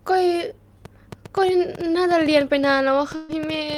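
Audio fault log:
0.85–3.78 s, train of clicks: Something, likely interference from nearby equipment or a faulty connection, keeps injecting pulses into the signal. It comes through as about eight similar ticks per second at an uneven pace, peaking roughly 5 dB above the speech and carrying on through pauses.
3.15–3.31 s, burst of packet loss: About 140 ms of audio never arrived in time to play. The receiver concealed the gap by extending the last sound for about 133 ms, fading it so it becomes a held buzz or hiss, before the speech resumes with that stretch missing.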